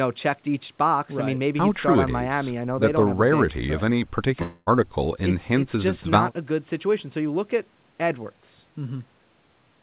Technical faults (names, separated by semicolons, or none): long network dropout